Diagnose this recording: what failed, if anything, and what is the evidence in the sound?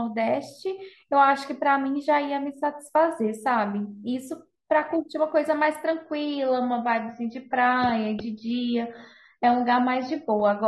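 From 5.85 s onward the speech abruptly goes dull, nothing above 6.3 kHz, no gap: a network-driven adaptive stream at a lower bitrate.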